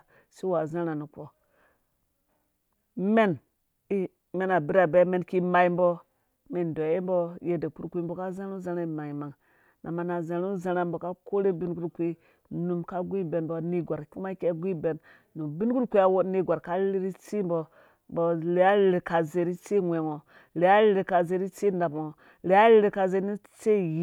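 Nothing goes wrong anywhere in this bit of speech, so there's really nothing to point out.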